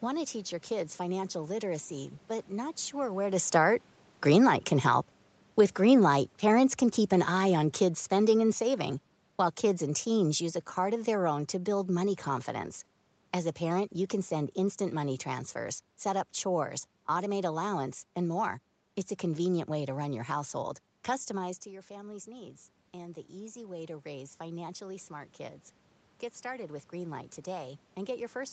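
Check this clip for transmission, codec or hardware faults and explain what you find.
Two gain-control faults are present, both from the call's automatic gain control reacting to level changes at the microphone.

Automatic gain falling, 5.81 to 12.19 s: after the talker moves around 3 s, the gain control judges the input too loud and lowers its gain by about 8 dB. The speech and the room noise sink together over those six seconds.

Automatic gain rising, 21.64 to 28.53 s: the talker moves away near 21.5 s and the input drops by about 13 dB. The gain control then raises its gain gradually, so the voice and its background swell together through to the end.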